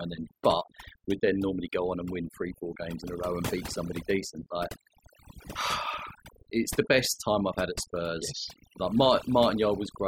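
A speech recording about 10 seconds long shows overdone noise removal from start to end. A noise reduction stage pushed individual frequency bands down or out whenever they sat near its noise estimate, so the background drops away and what remains breaks into twinkling, warbling specks, and quieter parts of the speech are cut along with it. Unlike codec artefacts, which follow the louder signal, this debris tracks the residual noise floor between and under the speech.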